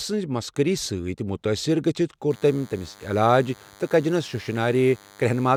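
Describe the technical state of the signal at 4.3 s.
At 4.3 s the speech carries DECT cordless phone buzz, running from 2.31 s, just after "سۭتۍ مُتٲثِر گٔژِھتھ", to the end of the clip. A nearby handset's 100 Hz radio bursts are rectified in the audio path, giving a thin, steady buzz about 25 dB below the speech.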